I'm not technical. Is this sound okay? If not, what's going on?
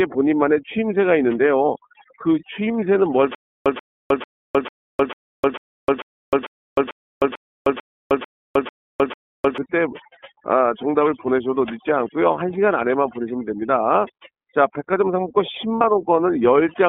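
No. Overdone noise removal, throughout: a noise-cleaning tool set far too strong removes background and quiet parts of the speech, leaving near silence with twinkling specks.

iLBC codec, throughout: this internet-phone format keeps only a narrow band, roughly 200 Hz to 3.5 kHz, so the speech sounds muffled, slightly rough and synthetic.

Stutter with silent gaps, from 3.35 to 9.58 s: a 136 ms snippet repeats about every 0.45 s, each followed by 309 ms of dead silence, likely from playback stalling and retrying. The speech meant for that stretch is lost.

Lost iLBC frames, 15.75 to 15.82 s: 60 ms of data went missing, and the decoder filled the gap with a brief held, slightly buzzy or breathy vowel sound before the speech returns almost immediately.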